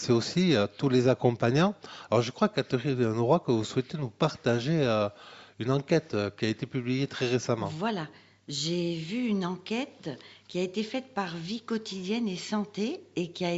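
No technical faults can be heard in this audio.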